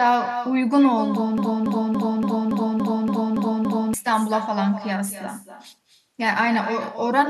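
From the start, every phrase is shadowed by an echo with no canceller. The far end's loudspeaker feeds its microphone, and nothing removes it. A thinner copy returns roughly 300 ms later, about 9 dB below the speech.

From 1.38 s to 3.94 s comes a broken-record loop. A 0.28 s fragment repeats back to back nine times. The stream likely stalled and kept resending its last held fragment. The speech meant for that stretch is lost.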